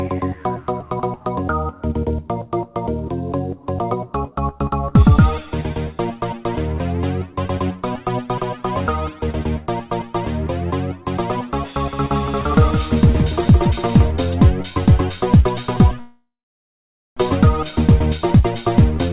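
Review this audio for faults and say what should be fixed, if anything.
From 11.93 to 14.11 s there's a doubled audio track: a second full-band copy sits roughly 150 ms behind, about 5 dB down, with no room tail, and it starts and stops abruptly. That's likely a second capture path or an edit leaving two copies out of step. Make sure only one source feeds the mix.

At 16.0 s there's a call audio freeze lasting until 17.19 s. The last sound gets stretched, then it's silent for about 0.86 s, and the audio picks up right where it left off, so nothing's lost but everything after arrives about 1.17 s late. The likely cause is packets held up in transit and the jitter buffer running dry. Check the network for delay spikes on that link.

From 18.30 s to the end there's a jitter buffer speed-up. The receiver drains its backlog by snipping out short pitch-period chunks, roughly a tenth of a second in total, so the sound runs at about 113% speed with unchanged pitch and feels hurried. 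Smoother packet delivery after the stall would avoid it.

The dull top end, with nothing above 4 kHz, fits the G.711 mu-law call path at 64 kbps.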